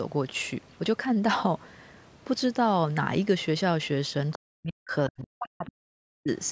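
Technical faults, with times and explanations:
4.33–4.38 s, other side's voice leaking through: a faint second voice, about 20 dB below the talker, slips past, likely from loudspeaker echo the canceller failed to remove.
4.37–4.92 s and 5.09–6.3 s, speech suppressed in double talk: the talker's voice drops by up to roughly 40 dB in pieces, likely because the echo canceller turned down both overlapping sides.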